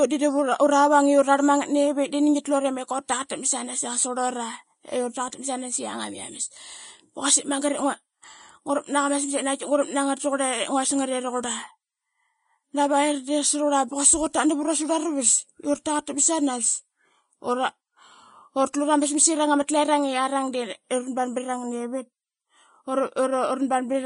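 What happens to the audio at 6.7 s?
At 6.7 s, as throughout the clip, the speech sounds hissy and grainy with nothing above 10.6 kHz, likely Vorbis compression at a low bitrate near 32 kbps turning treble detail into noise.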